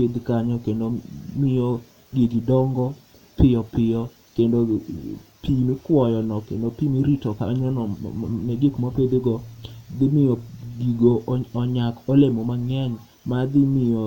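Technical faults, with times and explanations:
Nothing in the speech here stands out as a technical problem, so there's no fault to list.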